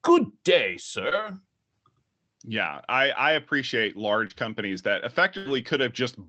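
Speech carried over a WebRTC call path, with an Opus codec at 40 kbps that adds its coding noise and cuts the top end near 8 kHz, suffers two cases of short concealed packet loss and one burst of packet loss. At 1.09 to 1.13 s and again at 4.27 to 4.32 s, about 20 ms of audio failed to reach the decoder in time. The receiver covered each hole by extending the preceding sound for roughly 18 ms and 24 ms respectively, then blended back into the real signal. Each spot comes across as a brief smear or wobble. At 5.38 to 5.47 s, a run of packets totalling about 80 ms went missing. Concealment stretched the last sound across some 75 ms while fading it down, giving a held buzz or dying hiss before the speech picks up again further along, with the stretch in between gone.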